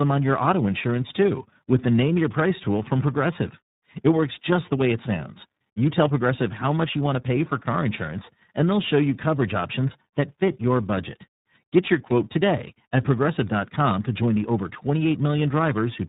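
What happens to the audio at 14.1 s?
At 14.1 s the speech carries tandem speech coding, present for the whole clip. It passed through G.726, then G.711, then iLBC, each decoding and re-coding the last one's output. Errors stack, so it sounds rough, muffled and warbly, with nothing above 3.8 kHz.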